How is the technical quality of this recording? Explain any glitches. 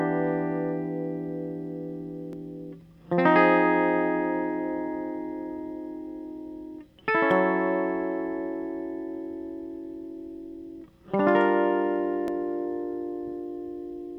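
The music skips three times. Audio missing between chunks at 2.33, 7.31 and 12.28 s: roughly 30 ms vanishes at each, about every 5 s, likely from losses at chunk boundaries, leaving abrupt joins.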